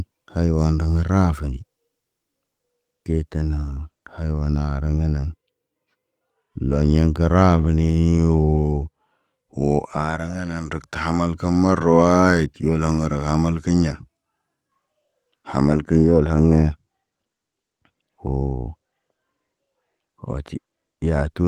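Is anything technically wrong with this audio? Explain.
No, nothing here is technically wrong with it.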